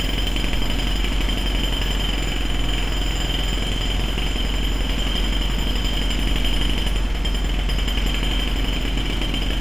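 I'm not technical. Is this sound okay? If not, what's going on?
Yes, nothing wrong here.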